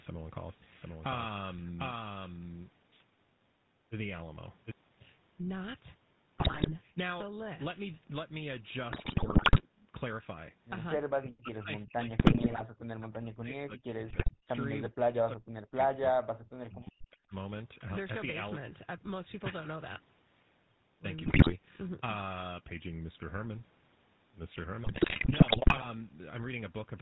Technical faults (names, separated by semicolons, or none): GSM full-rate codec; doubled audio track; GSM bit errors